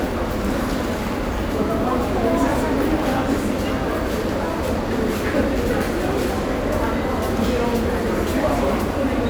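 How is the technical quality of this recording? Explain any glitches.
The recording has one technical fault, a loud pop. Between 1.12 and 1.40 s, two sharp pops sit a few decibels above the sound, which continues underneath. The likely cause is a sudden voltage step, such as a switch, plug or static discharge, shaped in the circuitry that follows.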